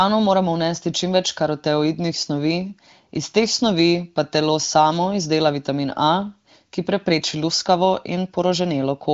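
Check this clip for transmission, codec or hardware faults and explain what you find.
Nothing faulty found in this speech: the AMR wideband (HD Voice) coding, with only faint damage and nothing above 7.5 kHz, fits a rate around 18.25 kbit/s, well clear of the rough lower modes.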